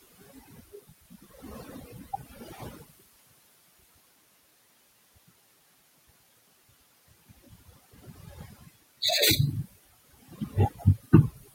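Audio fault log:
Throughout: overdone noise removal. The noise reduction is set far too hard. Any frequency band that sits close to its idea of the noise gets pushed nearly to nothing, so the room noise, which starts only about 17 dB under the speech, collapses into near silence with little twinkling specks left over. The quieter parts of the voice go down with it.
Throughout: noise suppressor artifacts. The suppressor is working frame by frame, pulling the bands it judges to be steady noise down by about 20 dB. You can hear the background sink away in the gaps and creep back up under the speech.
0.02–3.02 s, 7.29–8.75 s, 10.22–10.55 s, 10.71–11.06 s, 11.33–11.54 s: speech cut by the noise suppressor. In these stretches the suppressor mistakes bits of the speech for noise and turns them down along with the background, by about 19 dB at worst near the start, about 18 dB around 7.3–8.8 s, and about 12 to 15 dB in the short late ones. 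The opening run loses roughly two seconds' worth, the middle one well under a second, the last three just brief moments. Soft consonants and endings come out swallowed and faint.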